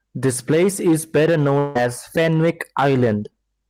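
From the start and throughout, hard clipping is present: the level is pushed about 6 dB beyond what the signal path can carry, so around one sample in twenty hits the ceiling and is sliced flat. The loud parts of the speech sound harsh and crackly. The waveform shows squared-off peaks, and the spectrogram shows bright vertical smears of harmonics reaching high up.

From 1.58 s to 1.76 s, roughly 170 ms of speech is lost, likely in a long network dropout. The gap is covered by a smeared, buzzy continuation of the preceding sound that fades without going fully silent. On the spectrogram it appears as a blurred, flattened band, and speech resumes with that portion missing.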